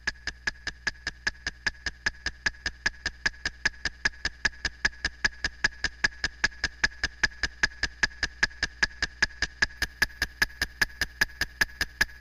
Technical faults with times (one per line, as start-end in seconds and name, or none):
9.77-12.21 crude rate conversion